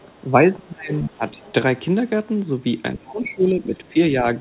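Speech, band-limited with nothing above 4 kHz, consistent with a narrowband call codec. The other side's voice leaks through faintly from 0.01 to 0.16 s and 1.29 to 1.53 s, roughly 25 to 30 dB below the talker, likely residual echo left by the canceller; on a spectrogram it shows as weak, separate harmonic traces. Speech is suppressed in double talk at 0.06 to 0.12 s, 0.29 to 0.93 s, 1.09 to 1.37 s and 2.96 to 3.97 s, dropping about 15 dB and up to about 25 dB around 0.3 to 0.9 s. The waveform shows the envelope sagging or notching in these spans.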